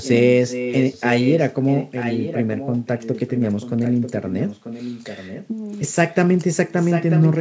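A speech clip with a delayed copy of the talker trailing about 0.94 s behind, somewhat quieter, at 0 to 0.1 s, 0.43 to 1.47 s, 1.66 to 5.48 s and 6.77 to 7.39 s, likely an echo leak from a loudspeaker-side canceller.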